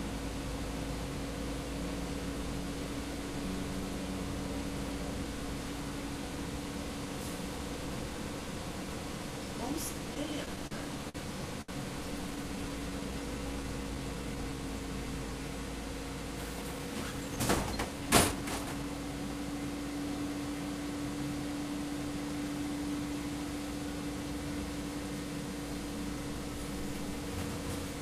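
Between 10.14 and 10.72 s, packets kept arriving late, so the jitter buffer ran dry four times, producing repeated stalls (stutter). The receiver extended the previous sound to cover about 77 ms in total, the longest wait 42 ms. Nothing is lost, but the sound catches and drags.

Two short stalls from a late packet follow, at 11.09 to 11.16 s and 11.61 to 11.69 s. Each time a packet missed its slot, the buffer emptied, and the receiver held the last sound for 55 ms and then 69 ms before resuming exactly where it stopped. Each is a brief hang, with a faint buzz or dip.

From 12.31 to 14.69 s a jitter buffer slow-down builds back reserve. The receiver repeated tiny periodic fragments and bits of quiet, adding 240 ms and running the sound at 90% speed. Pitch stays put while everything stretches out, with occasional slight warble.

From 16.54 to 18.84 s the opposite happens: a jitter buffer speed-up trims excess delay. 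The receiver cut out many small slices, roughly a fifth of a second altogether, so the sound plays at 110% speed at unchanged pitch and comes across as hurried.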